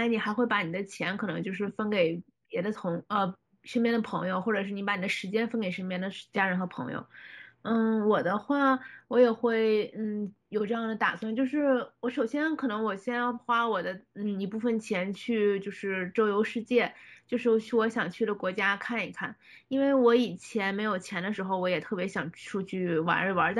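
Imaging from linear upsampling runs throughout the speech. Raising the rate from 16 kHz to 44.1 kHz by straight-line interpolation dulls the top of the band and leaves a faint mirror image, roughly 35 dB down, between 8 kHz and 16 kHz, giving sibilants a light metallic shimmer.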